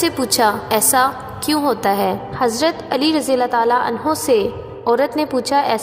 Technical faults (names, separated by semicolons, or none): de-emphasis applied wrongly